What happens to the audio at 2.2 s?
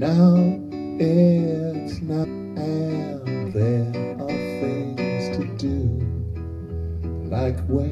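At 2.23 to 2.25 s there is damaged data in a compressed stream: corrupt bytes make the decoder misread frames and lose sync, producing a brief chirp, squawk, click or short hole. On a spectrogram it shows as a thin broadband smear; the waveform shows a short, jagged discontinuity.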